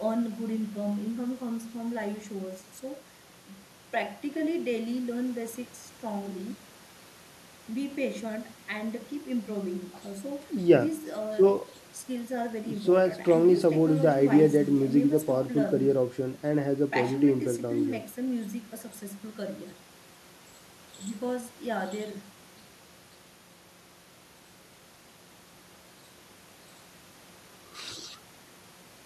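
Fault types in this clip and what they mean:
No technical faults can be heard in this speech recording. A low background noise from the room sits underneath, about 19 dB below the speech.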